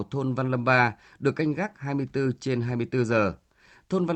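No technical faults occur in this speech clip; it was carried over a call codec, which fits a bitrate around 40 kbps, with the top of its frequency range ending near 8 kHz.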